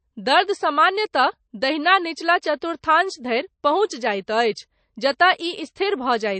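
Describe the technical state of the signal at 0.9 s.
At 0.9 s you're hearing the same damage that runs through the whole speech clip, start to finish, and it's most likely MP3 compression. Nothing comes through above about 8.3 kHz, so the treble is simply sliced off, and the lack of bits shows plainly: the encoder drops weak frequency lines that flicker in and out between frames, giving that watery, swirly texture. It all fits a low bitrate of around 35 kbps.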